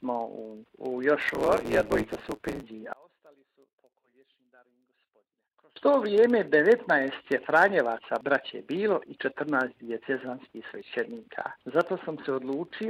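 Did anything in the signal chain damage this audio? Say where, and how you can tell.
Yes. From 1.20 to 2.64 s there is a block size mismatch (truncated) at the driver or buffer stage. A 109 Hz buzz runs under the sound, which plays about 1.16 times fast at roughly normal pitch. That fits 512-sample blocks having their ends discarded by a shorter read.

From 2.93 to 5.76 s the level drops by about 34 dB and the centre content nearly vanishes, leaving only a faint residue. This is one channel inverted, likely a reversed-polarity connection in the analogue wiring, so the shared material cancels when the channels are summed to mono.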